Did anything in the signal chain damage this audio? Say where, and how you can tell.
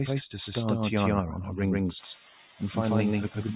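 Yes. A doubled audio track runs through the whole clip. A second full-band copy of the sound follows roughly 150 ms behind the first, at about the same level. It has no decay, no room colouring and no build-up, so it is not acoustic echo or reverb. A true echo path would be quieter and coloured by the room. This points to a buffer or capture stage. The likely cause is a second, slower capture path being mixed in alongside the original.

Noise suppressor artifacts also run throughout, and they come from the call-processing stage. Between phrases the background drops by about 5 dB, then climbs back whenever sound is present. That frame-by-frame pumping distinguishes it from the genuine rise in room noise near 2 s, which lifts by about 18 dB and stays there. The band-limiting at 4 kHz from the G.711 path sits underneath both faults.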